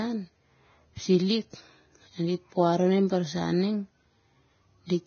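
Throughout the speech, nothing sounds above 6.6 kHz. The treble is hissy and grainy, with blurred onsets. This likely comes from heavy Vorbis compression at a very low bitrate.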